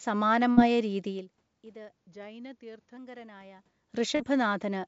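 At 0.52 s there is a burst of packet loss, lasting until about 0.59 s. A run of audio never arrived in time. The receiver held the last sound for about 51 ms and let it fade, so it comes out as a brief sound that dies away. Then playback jumps ahead. About 60 ms of the real signal is simply gone. The sound picks up again on "രീതിയിൽ ഇത്".

From 1.97 s to 2.97 s, right after "രീതിയിൽ ഇത്", the audio slows by about 6.2 percent. Pitch drops with it, by 111 cents, a little more than a semitone. The speech sounds detuned and dragged for that second, then snaps back to normal speed. This is likely a drift correction step: clock-matching software changed the playback rate in one jump to rebalance its buffer.

At 4.15 s comes a short concealed packet loss, over by 4.21 s. About 40 ms of audio went missing. The receiver patched the hole with roughly 41 ms of synthesized continuation, extending the previous sound, then blended back into the real signal. 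It is heard as a quick smear or wobble in the speech rather than a clean gap.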